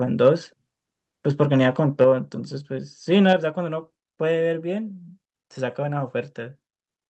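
At 2.01 to 2.04 s a peak turns harsh and crackly, likely microphone overload: the tops push about 1 dB past the converter's limit, so a small share of samples get flattened. Right after, at 2.04 s, the whole sound, background included, suddenly sits about 4 dB quieter. That's likely the microphone volume being stepped down by the call software reacting to that clipped peak. The same thing happens again: microphone overload crunches a peak at 3.29 to 3.33 s, again about 1 dB over with a bit less clipping, then at 3.33 s the microphone volume steps down once more, this time about 5 dB.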